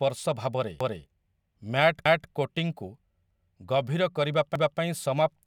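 A stutter repeats a quarter-second of speech at 0.81, 2.06, 3.31 and 4.56 s: overlapping chunks, each 1 s block restarting 250 ms early.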